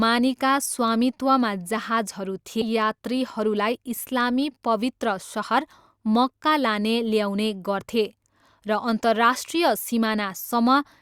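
At about 2.61 to 2.64 s the speech jumps abruptly forward, with a brief blip at the join, so the passage that should connect the two sides of that point never arrives and the continuity breaks. This is a stream segment skipped. The likely cause is that one chunk of the segmented stream failed to load, and the player moved straight on to the next chunk rather than stalling, splicing the sound across the gap.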